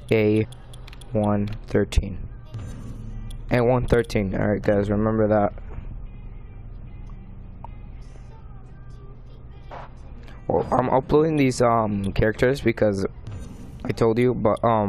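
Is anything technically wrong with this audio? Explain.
Yes. Damaged data in a compressed stream causes two brief glitches, at 0.43 to 0.45 s and 5.68 to 5.70 s. Corrupted bytes make the decoder misread frames and lose sync until it finds the next frame header. Each is a short chirp or blip.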